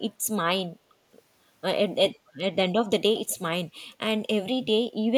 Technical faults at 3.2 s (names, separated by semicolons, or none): echo leak